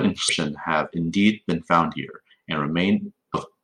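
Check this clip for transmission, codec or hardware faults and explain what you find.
The compressed stream carrying this speech has damaged data in two places, from 0.25 to 0.30 s and from 3.31 to 3.35 s. At each spot some of the encoded bytes are wrong, so the decoder misreads those frames, loses its place in the bitstream and hunts for the next valid frame header before decoding normally again. Each break is roughly 40 ms long and comes through as a short chirp or squawk that cuts across the speech.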